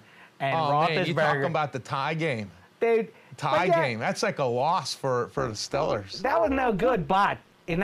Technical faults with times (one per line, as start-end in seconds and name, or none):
5.38-7.84 overlap-add ripple